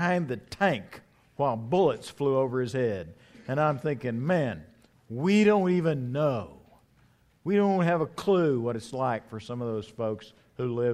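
No technical fault can be heard anywhere in the recording.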